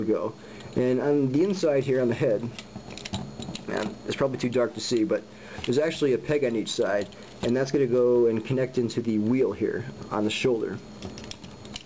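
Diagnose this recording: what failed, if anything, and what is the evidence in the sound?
Nothing failed: no stage in the chain, from wiring through converter, buffer, codec and network to playback, leaves an audible fault anywhere in this recording.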